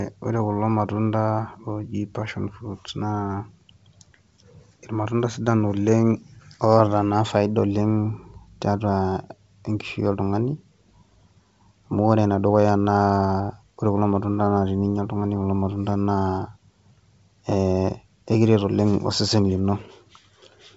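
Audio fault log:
No faults heard.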